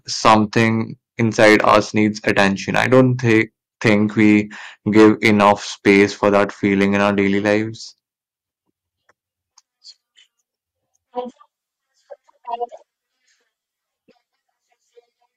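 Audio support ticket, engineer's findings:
Hard clipping, 0.25–0.68 s, 1.20–3.41 s, 3.86–4.36 s, 4.97–5.52 s, 5.87–6.44 s, 6.81–7.55 s. Speech peaks overdriven about 6 to 11 dB past a gain stage or converter ceiling, tops squared off; added upper harmonics give harsh fuzz on loud syllables.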